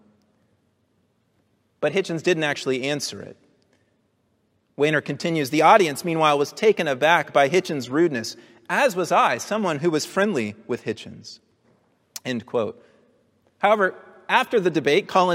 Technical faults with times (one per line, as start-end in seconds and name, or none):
none